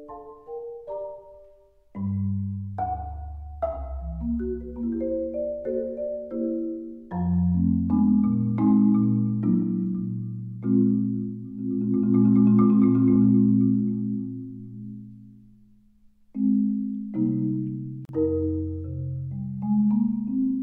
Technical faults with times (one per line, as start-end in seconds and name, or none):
18.05-18.09 gap at a join of encoded pieces